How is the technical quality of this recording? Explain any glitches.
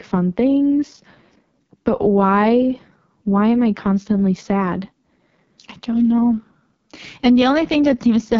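Technical quality is poor throughout, from AMR wideband (HD Voice) coding at a very low rate. The roughness points to its lowest mode, around 6.6 kbit/s. The codec models speech as pulses through a vocal tract filter. At this rate it does so coarsely, so the speech sounds rough and raspy. Nothing is heard above about 7.4 kHz.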